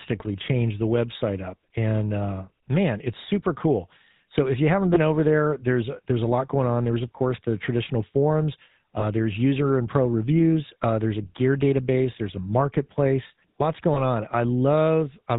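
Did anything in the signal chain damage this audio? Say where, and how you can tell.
Yes. At the codec stage, the whole clip carries GSM full-rate codec damage: speech is band-limited to 4 kHz and has a buzzy, gravelly roughness. The sparse pulse excitation driving a vocal-tract model causes it, and the sound fits 13 kbps GSM full rate.

At the network stage, lost GSM frames produce three brief rough, metallic rings. They fall at 4.94–4.99 s after "if you haven't", 9.00–9.04 s after "course the traditional forums", and 13.94–14.01 s after "a marketplace lots". Each fits one lost 20 ms frame concealed by repeating the previous frame's parameters.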